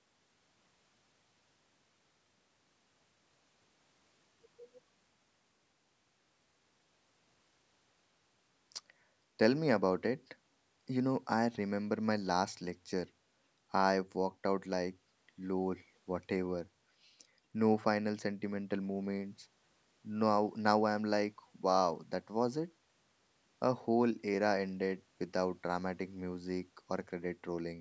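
No technical faults can be heard in this speech.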